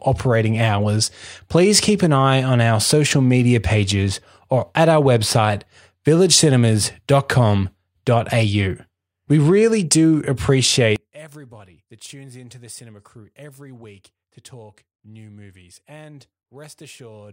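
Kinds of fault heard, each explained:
One channel inverted: From 10.96 s to the end, the speech drops by about 24 dB and becomes faint. The likely cause is one stereo channel with reversed polarity. Summed to mono, the shared centre cancels, leaving only the difference between channels.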